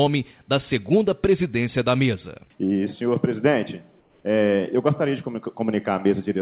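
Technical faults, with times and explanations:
4.0–4.24 s, comfort noise in place of the background: the real background becomes steady, featureless noise about 4 dB quieter, likely synthetic fill generated while transmission paused.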